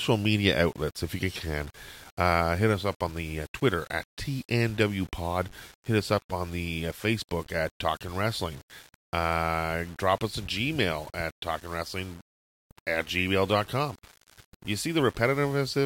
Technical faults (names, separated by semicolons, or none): low bit depth without dither